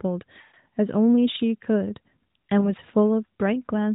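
From 0.42 to 0.56 s, lost AMR speech frames: about 120 ms of corrupted frames are concealed by repeating the last good pitch and vocal-tract settings at falling gain, so the sound stretches and fades rather than cutting dead. At 2.60 s, a single lost frame gives only a brief dip or warble.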